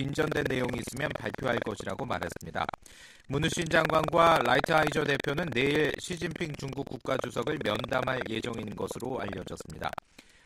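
A steady robotic buzz at 21.5 Hz runs through the whole clip, which fits a 2048-sample buffer: buffer tearing, with a small slice of each period replaying audio about a tenth of a second old.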